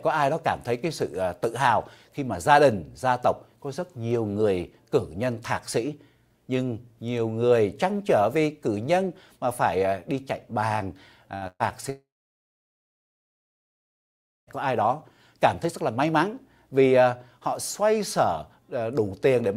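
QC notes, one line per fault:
11.35 to 11.44 s and 11.47 to 11.63 s, burst of packet loss: two closely spaced gaps where consecutive packets never arrived in time. The receiver extended the last sound it had and faded it, heard as a short held buzz or hiss. The first gap drops 60 ms of audio. The second drops 120 ms, and its fill dies away into about 40 ms of silence before the sound resumes further along.
11.90 to 14.50 s, long network dropout: about 2.6 s of audio is gone, likely because the stream stopped arriving altogether. The concealment holds the last sound only briefly and lets it decay, leaving roughly 2.4 s of silence. The audio then comes back at a later point, so everything in between is missing rather than delayed.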